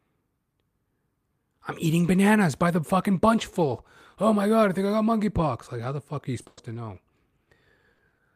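After "the fuck are you", from 6.41 to 8.21 s, repeated packet loss (robotic sound): about six short holes patched by repeating prior audio, sounding choppy with pieces missing; the spectrogram shows smeared, stuttering blocks.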